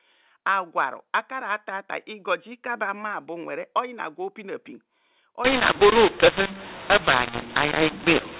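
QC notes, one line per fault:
5.45–8.39 s, mu-law and A-law mixed up: from 5.45 s to the end, G.711 data written as mu-law is decoded as A-law. The two logarithmic curves disagree, so sample levels come out scrambled, some too loud and some too quiet, and near-zero samples are pushed well above silence. The speech turns harsh and distorted and pauses fill with hiss, whereas the mu-law telephone coding before 5.45 s gives only its normal 4 kHz band limit and faint quantisation noise.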